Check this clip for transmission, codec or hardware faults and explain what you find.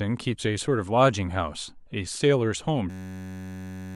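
One fault: a system hang loop runs from 2.90 s to the end at 3.96 s. The playback system stalled while the sound hardware kept replaying one 10.67 ms slice of its ring buffer, which fits a 512-sample buffer. The speech gives way to a steady buzz at 93.8 Hz, and about a second of audio is lost. The copies are exactly identical, unlike packet-loss concealment, whose repeats vary and fade.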